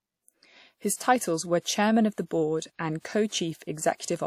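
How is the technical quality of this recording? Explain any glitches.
The recording has one audible glitch, a brief pre-echo just before a sharp attack. From 0.96 to 1.00 s, right before "were chairman", the transform codec spread quantisation noise sized for the loud onset across its whole block, so about 40 ms of hiss leaks in ahead of the attack and softens it.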